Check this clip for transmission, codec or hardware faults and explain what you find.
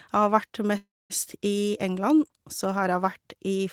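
There's one fault here, a call audio freeze from 0.77 to 1.12 s. The speech stalls, the last bit of sound smears on as a fading buzz or hiss for a moment, then drops to silence for about 230 ms before picking up exactly where it left off. The likely cause is packets held up in transit, draining the jitter buffer. Nothing's lost, but roughly a third of a second of gap gets inserted, pushing everything after it later.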